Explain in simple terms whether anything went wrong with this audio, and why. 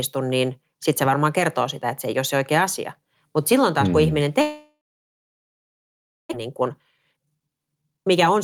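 Right after "taas kun mm ihminen", at 4.41 s, the speech cuts out until 6.35 s. This is a long network dropout. The audio likely stopped arriving. About 1.3 s of speech is simply lost.

From 6.41 to 8.37 s, the speech runs about 27% fast at normal pitch. This is a jitter buffer speed-up, trimming roughly half a second to catch up.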